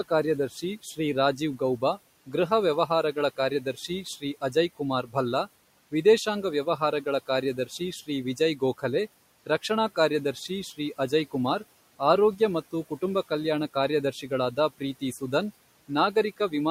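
Speech cut by the noise suppressor shows up all the way through, in stretches at 0.09 to 2.34 s, 2.87 to 5.15 s, 5.91 to 8.83 s, 9.46 to 11.34 s, 11.99 to 15.22 s and 15.88 to 16.53 s. The suppressor is mistaking soft bits of speech for the room noise sitting about 22 dB below the talker, and turns them down with it. Within each stretch, only a few hundred milliseconds or less are actually hit, with dips of about 12 to 18 dB, the deepest near 12 to 15 s. Those quiet consonants and word endings come out swallowed and faint.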